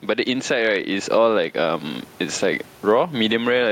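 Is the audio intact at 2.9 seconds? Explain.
No. Gain pumping runs through the whole clip, including 2.9 s. The likely cause is input gain set far too high, so a fast limiter clamps every loud moment. The gain swings by around 15 dB, squashing the speech.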